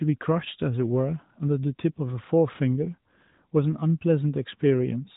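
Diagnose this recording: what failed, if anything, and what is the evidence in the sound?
Nothing failed in this recording.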